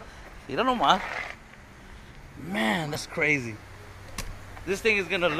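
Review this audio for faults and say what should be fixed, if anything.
Damaged data in a compressed stream appears twice, from 0.30 to 0.35 s and from 2.92 to 2.96 s, each a brief glitch of about 44 ms. At these points the encoded bytes are corrupt, so the decoder misreads or discards the affected frames, loses sync and has to hunt for the next valid frame header, producing a short burst of garbled sound. To prevent it, verify transfers with checksums, use error-resilient transport, and re-fetch or re-encode from a clean source.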